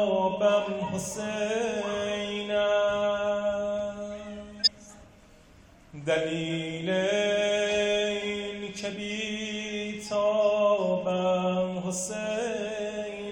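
A short stretch of audio with one fault: compressed frames skipped between 4.59 and 4.68 s. About a tenth of a second of material is simply never played, so the sound jumps forward, most likely because coded frames were missing or rejected by the decoder as damaged. On a spectrogram the harmonic and noise patterns shift abruptly. The waveform shows a discontinuous envelope.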